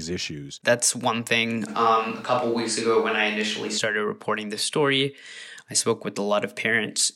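From about 1.70 s, right after "one thing", the close microphone's feed likely drops out and the recording falls back on a more distant pickup, a switch to a distant microphone. The speech turns suddenly roomy and hollow, with thinner bass, while its level stays much the same and background room noise sits roughly 30 dB below the speech. At about 3.77 s, just before "reporting this story I", the close sound returns just as abruptly.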